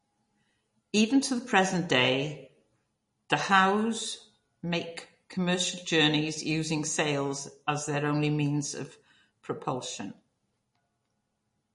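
The speech carries plainly audible MP3 compression damage throughout. Nothing sounds above 10.6 kHz, and the sound is watery and swirly, likely from a bitrate near 40 kbps.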